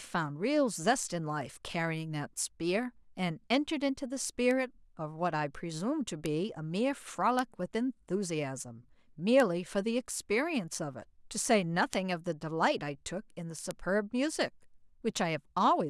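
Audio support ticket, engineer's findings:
Bit error spikes at 4.51, 6.26, 7.39, 9.4, 11.93, 13.71 and 15.17 s. Seven isolated sharp ticks over the speech, broadband and unrelated to it. Peaks about -16 dBFS, the first about -22 dBFS. Each is one corrupted sample; the one at 11.93 s spans three. A flipped bit jumps the sample value by a power of two, then it snaps back. Probable component: memory buffer or digital link.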